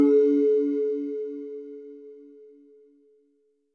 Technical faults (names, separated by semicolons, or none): wrong sample rate